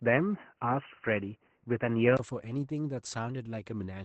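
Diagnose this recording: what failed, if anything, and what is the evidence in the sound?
The codec stage shows Opus voice compression throughout. The speech sounds hoarse and slightly robotic, which fits SILK coding at about 12 kbps in 20 ms frames. On a spectrogram, energy stops cleanly at 8.6 kHz, and harmonics look smeared and coarsely quantised.

From 0 to 2.19 s the speech is narrow and boxy, with nothing above 3 kHz, then opens up after a 20 ms gap. The likely cause is an input switched to a poorer device at the capture stage. A spectrogram shows a low ceiling that lifts at 2.19 s, and the waveform shows a brief flat dropout, a level step of roughly 5 dB, and a different faint noise floor about 50 dB down.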